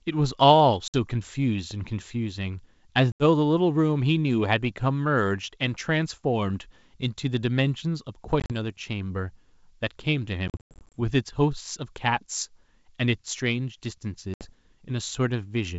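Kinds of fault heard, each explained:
Packet loss on an ADPCM call: missing packets become silence and desynchronise the decoder's predictor, so speech breaks off abruptly, then returns briefly slightly distorted before settling.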